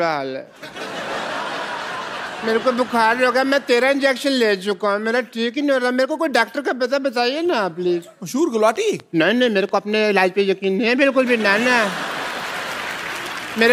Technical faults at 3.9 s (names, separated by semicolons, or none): none